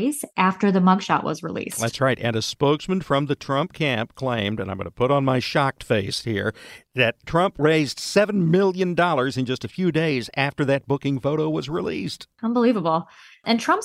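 At 9.64 s, between "million in just" and "a few days after", a corrupt frame decoded produces a brief glitch, with a peak around -25 dBFS. Damaged bits in a single compressed frame were decoded anyway, misplacing energy in frequency. It lasts only about the length of that one frame.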